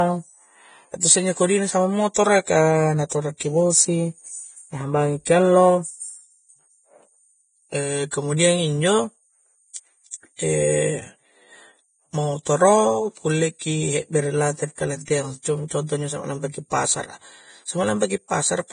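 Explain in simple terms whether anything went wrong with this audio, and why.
Vorbis compression, heard throughout the speech, most likely caused the hissy, grainy sound. The codec squeezed the audio hard, removing everything above 9.7 kHz and coding the remaining treble so roughly that fine detail became noise, dulling the sound and blurring its edges.

Pre-echo, at 8.11 s and from 9.74 to 9.76 s, puts a short hiss just before sharp sounds. The codec spreads its errors across a short chunk of time, so noise meant for a loud attack leaks into the quiet moment before it and smears the attack.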